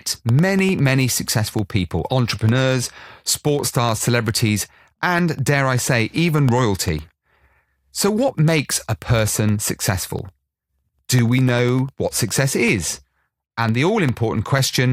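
From 0.09 s to 14.79 s, periodic USB or driver dropouts recur every 0.1 s. Each time the transfer stalls, about half a millisecond of speech drops to silence, heard as steady ticking. The waveform shows evenly spaced gaps, and the spectrogram shows thin vertical broadband lines.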